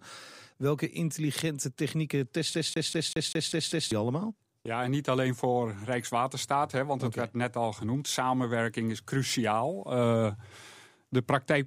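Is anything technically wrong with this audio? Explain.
Yes. From 2.54 to 3.92 s the speech is caught in a CD stuck on one turn: a scratch keeps throwing the laser back one track, so one 196 ms slice plays seven times in a fast, even stutter with a brief mute at each jump. The waveform shows identical repeating blocks split by thin silent gaps, and the spectrogram shows the same pattern tiled at equal intervals.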